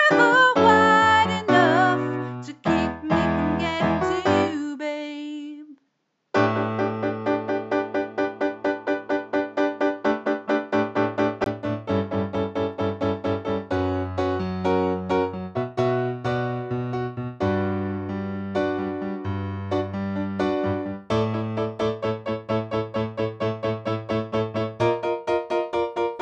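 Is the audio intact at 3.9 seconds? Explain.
No. At 3.9 seconds you're inside a dull, band-limited stretch from 0.0 to 11.46 s, with nothing above 7.6 kHz, a slightly different level and a faint new noise floor. It's likely an input switched to a poorer device, and it clears after a 20 ms gap.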